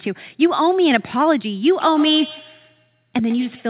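From 1.8 s to the end, a feedback echo between two devices: another device replays the speech into a microphone its echo canceller ignores, so each syllable returns roughly every 150 ms, about 18 dB down. A spectrogram shows faint, evenly spaced copies of each trace.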